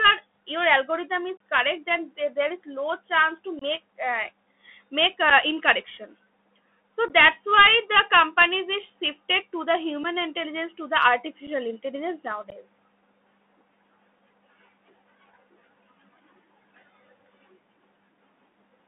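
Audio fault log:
Throughout: Bluetooth CVSD headset codec. Energy stops near 3.5 kHz and below 200 Hz, giving a flat cutoff on the spectrogram. Granular hiss and scratchy sibilants fit a 64 kbps delta-modulation link.
1.37, 3.59–3.63, 5.30, 7.08, 10.04, 11.47, 12.50–12.52: unconcealed Bluetooth headset packet loss. Lost packets leave abrupt holes of roughly 8 to 30 ms, seen as vertical gaps in the waveform.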